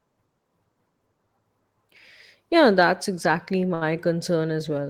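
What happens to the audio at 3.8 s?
At 3.74 to 3.84 s the speech hits a short stall from a late packet. A packet arrived after its playout time and the jitter buffer ran dry, so the receiver stretched the last sound for about 67 ms until it came, then resumed exactly where it left off. Nothing is lost, but playback now runs 67 ms later. A sound is held too long, with a faint buzz or dip. On a spectrogram the harmonics run flat and repetitive; the waveform shows a periodic, looped stretch.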